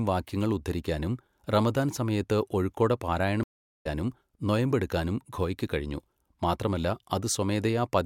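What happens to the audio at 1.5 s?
Nothing goes wrong at 1.5 s; the speech carries on intact through that moment with no dropout, click, distortion or other fault.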